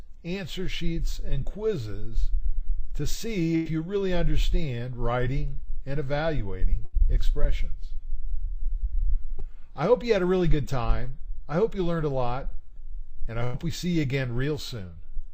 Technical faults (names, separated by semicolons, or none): burst of packet loss; short concealed packet loss